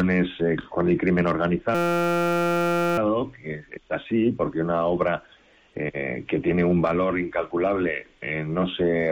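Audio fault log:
1.75–2.98 s, system hang loop: for about 1.2 s the playback freezes on a single 5.8 ms slice of sound and repeats it exactly, over two hundred times in a row, which fits a 256-sample buffer. The system stalled while the audio hardware kept cycling the same ring buffer. Because the slice is so short, the repetition fuses into a steady buzz pitched at the loop rate of 172 Hz rather than a stutter. Essentially no audio is skipped when playback resumes.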